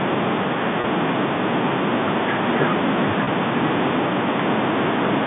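It's a speech clip over a telephone-band line, with everything sitting between roughly 150 Hz and 3.6 kHz, and it has two short dropouts covered by packet loss with pitch repetition, at 0.81 to 0.84 s and 3.24 to 3.27 s. Each gap is about 30 ms, which fits a single lost packet. The receiver bridges it by looping the last pitch period, so instead of a hole you hear a brief held, slightly buzzy smear before the speech picks back up.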